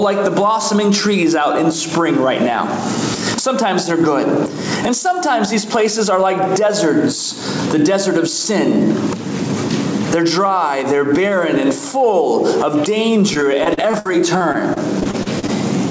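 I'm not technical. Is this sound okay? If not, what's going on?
No. There are two problems.

The first is gain pumping, and it runs through the whole clip. The level keeps rising and falling in a big swing. Loud and soft parts end up squashed close together. The likely cause is a microphone level set far too high. A fast automatic level control then keeps pulling it back down.

The second is repeated packet loss, which gives a robotic sound. It runs from about 13.34 to 15.50 seconds. Small pieces of the audio went missing again and again. Each hole was patched by stretching out the sound just before it. The longest hole is about 61 milliseconds. So this stretch sounds choppy. The clip also came through a call connection, which removes everything above 8 kHz.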